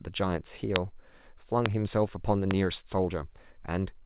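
At 0.76 to 0.78 s, a loud pop cuts through the speech. A second comes at 1.66 to 1.68 s, and a third at 2.51 to 2.53 s. Each is a single sharp click, far louder than the speech. The last is slightly softer. The speech carries on underneath each pop without a break. The likely cause is a sudden voltage step or pulse entering the signal chain. The band stops at 4 kHz throughout, which fits a narrowband call codec such as G.711.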